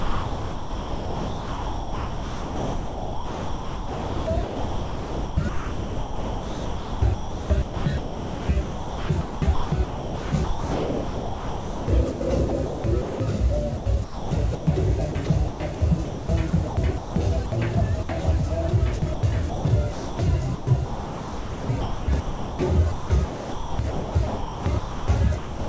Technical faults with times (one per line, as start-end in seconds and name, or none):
0.00-13.20 sound chopped by the voice detector
13.77-17.52 sound chopped by the voice detector
18.03-18.09 sound dropped by the voice detector
18.99-25.68 sound chopped by the voice detector